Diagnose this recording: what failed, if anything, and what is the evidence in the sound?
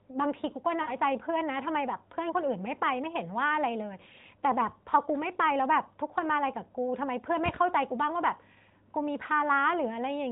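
Lost AMR speech frames, at the network stage, from 0.82 to 0.95 s. The decoder repeats its last pitch and vocal-tract settings with falling gain, so the sound smears and fades. The spectrogram shows flattened harmonics under the 4 kHz narrowband ceiling, and the waveform shows about 60 ms of decaying envelope, which fits three 20 ms frames.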